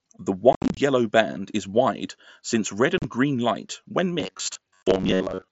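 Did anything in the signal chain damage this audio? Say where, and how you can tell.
Yes. Unconcealed Bluetooth headset packet loss on the wireless link between headset and phone. From 0.53 to 0.77 s, about 158 ms of speech drops out in chopped holes, the longest 67.5 ms. Smaller gaps follow at 2.98 to 3.04 s and 4.83 to 4.86 s. Edges are abrupt, and nothing fills them.

From 4.20 s to the end, the speech turns into a rigid, metallic buzz near 94 Hz. It still loosely tracks the speech. The likely cause is a driver or buffer stage repeating short chunks most of the time, which fits a buffer of about 10.7 ms.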